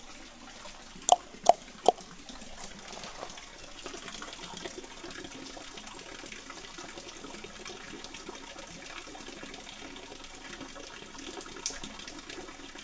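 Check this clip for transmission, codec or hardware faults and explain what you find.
One fault runs through the whole clip: a wrong sample rate. Everything plays at two-thirds speed and about 7 semitones low, which fits 24 kHz audio played back at 16 kHz. Unlike a pitch-shift fault, timing and pitch drop together, so every event sounds both slower and deeper.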